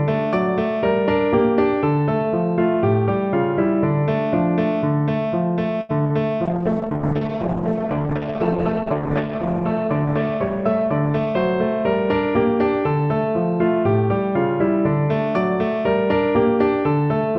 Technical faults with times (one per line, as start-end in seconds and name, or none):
5.81-5.91 short stall from a late packet
6.03-6.11 short concealed packet loss
6.47-13.86 call bitrate drop
11.10-11.34 jitter buffer speed-up